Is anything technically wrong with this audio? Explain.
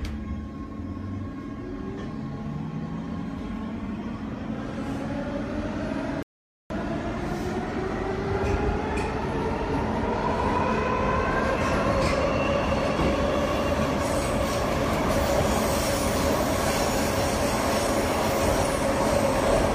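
Yes. A rebuffering stall occurs from 6.23 to 6.70 s: the player exhausted its downloaded audio and paused until more data arrived. The sound drops to silence for about 0.48 s, then resumes exactly where it left off, so nothing is lost but time is added.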